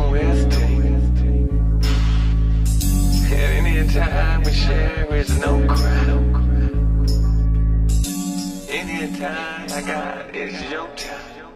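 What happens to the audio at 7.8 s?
At 7.73 s the adaptive stream switches to a lower bitrate and stays there to the end. The change is abrupt with no gap, and nothing remains above 12.3 kHz. The lost top end points to a step down from roughly 96 kbit/s AAC to 16 kbit/s HE-AAC.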